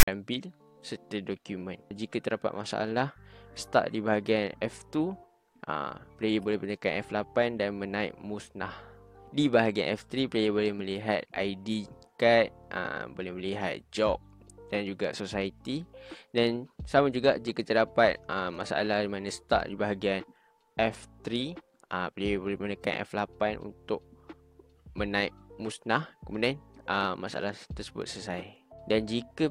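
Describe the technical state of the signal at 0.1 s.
File tags played as audio occupy 0.0 to 0.08 s. Text tag bytes read as samples give a hard-edged, one-sided rasp. The zero padding then drops to silence.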